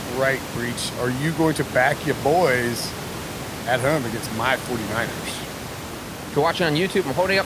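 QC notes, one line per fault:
No faults heard.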